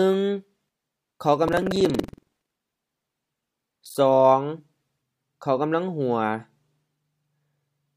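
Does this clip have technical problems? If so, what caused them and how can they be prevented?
Yes. From 1.44 to 3.95 s a robotic rattle at 21.5 Hz sits on the sound, which fits a 2048-sample buffer. This is buffer tearing: the writing and reading positions cross each period, splicing in a small slice of audio from one lap earlier. Prevent it by keeping the writer safely ahead of the hardware read pointer with adequate buffering and correct period synchronisation.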